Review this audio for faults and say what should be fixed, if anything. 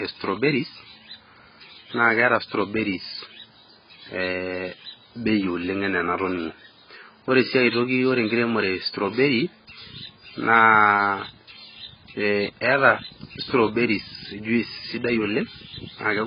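The speech is dull throughout, with nothing above 5 kHz and a warbling smear on sibilants. Heavy AAC compression is the likely cause, consistent with a bitrate near 12 kbps. Encode at a higher bitrate to prevent it.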